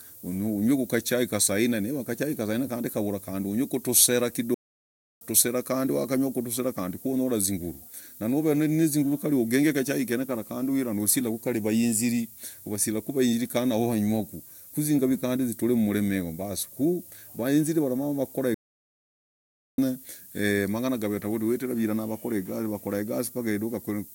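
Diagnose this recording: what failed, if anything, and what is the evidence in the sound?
Sample-format conversion failed: the speech carries low bit depth with noise shaping for its full length. A steady, thin hiss sits under everything, only about 15 dB below the speech, and climbs steeply toward the top of the band. That pattern fits a requantisation to around 8 bits, with the rounding error fed back so the noise is pushed out of the midrange and piled up in the highest frequencies.

Playback failed twice with a playback stall, where the speech cuts off mid-flow into silence. The first gap runs from 4.54 to 5.21 s, about 0.67 s, and the second from 18.54 to 19.78 s, about 1.24 s. These are clean silences rather than noise bursts or repeated fragments, which points to the player's output buffer running dry, likely from data not arriving in time or a blocked playback thread, before the output recovered.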